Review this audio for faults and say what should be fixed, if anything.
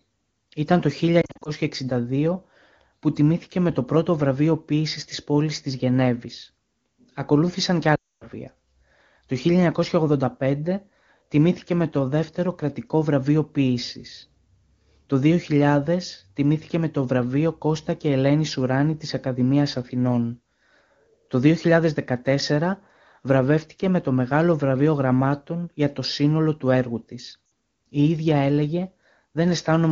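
Lost AMR speech frames at 1.21–1.50 s (brief scattered dips), 7.95–8.27 s (a 260 ms dropout falling to near silence) and 27.45–27.51 s, right after "σύνολο του έργου της". Radio errors broke the frame checksums, so the decoder kept replaying the last good pitch and vocal-tract settings at falling gain. A stronger radio link or more robust channel coding would prevent this.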